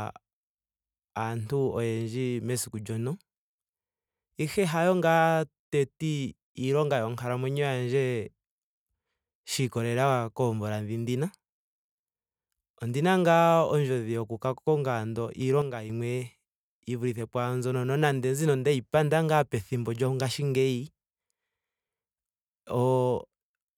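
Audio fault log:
15.62–15.90 s, one channel drops out: just after "yoku ka konga ando", the speech level falls abruptly by about 6 dB for 0.28 s, then snaps back to its earlier level. The likely cause is one side of a stereo feed going silent for that moment. When the two channels are summed to mono, material shared by both loses half its contribution, which gives the 6 dB step, and anything carried only on the lost side disappears until it returns.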